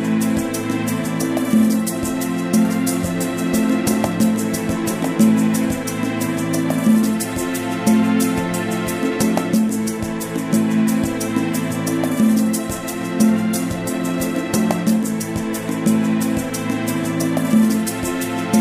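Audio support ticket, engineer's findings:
Doubled audio track, 2.65–5.65 s: full-band copy about 5 dB down, roughly one second late, no decay. Likely a second capture path or misaligned edit. Waveform shows repeated envelope shifted ~1 s.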